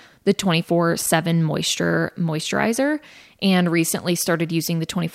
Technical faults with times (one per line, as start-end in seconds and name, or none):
0.98-1.09 loose connector crackle